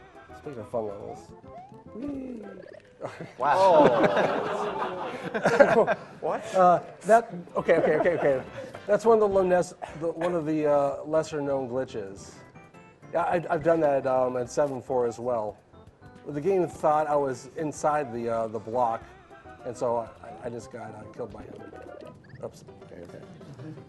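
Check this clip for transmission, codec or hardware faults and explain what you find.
One transmission fault turns up: DAB burbling, from 12.14 to 12.27 s. Weak reception let bit errors slip past the error correction, roughly 0.15 percent, corrupting scale factors and samples in the MP2 data. Individual sub-bands jump in level for up to a frame, and about ten frames were damaged. It is a brief burbling laid over the programme, which keeps running underneath, unlike the silent gap of a dropout.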